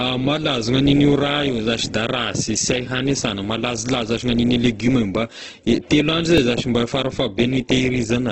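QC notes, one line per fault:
Throughout, Opus compression: grainy, rough, noisy texture with nothing above 8.3 kHz, so the audio sounds band-limited. This is likely Opus in its music (CELT) mode at a low rate, around 12 kbps, filling starved bands with folded or noise-like content.
6.38 s, repeated buffer: a brief click-like buzz as a 1.33 ms slice plays three times with a hard join at each repeat, which fits a 64-sample buffer replayed when new audio arrived late, with next to nothing lost.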